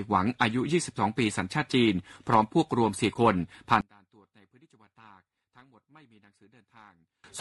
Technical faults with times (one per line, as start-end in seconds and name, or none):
0.00-7.40 low-delay AAC compression
2.34 block of digital silence
3.13-3.16 AAC frame loss with muting
3.81-7.24 one channel inverted